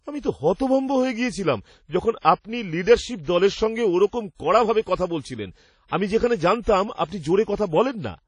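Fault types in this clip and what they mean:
WMA compression: The speech sounds ringing and washy, with a hiss that breathes with the signal. This is likely from WMA encoding at a low bitrate such as 32 kbps. A spectrogram shows nothing above 10.1 kHz, with blocky gaps where weak detail was dropped.
Pre-echo: From 2.19 to 2.25 s, a short hiss runs about 59 ms ahead of a sharp attack, as block-wide quantisation noise fills the quiet before the onset. The waveform shows a noisy smear leading into a softened transient.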